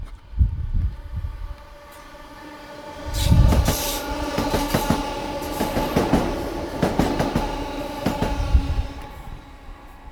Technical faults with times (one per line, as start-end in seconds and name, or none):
0.00-10.11 sample clock jitter